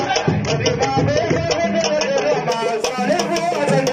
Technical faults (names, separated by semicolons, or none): adaptive stream starting at a low bitrate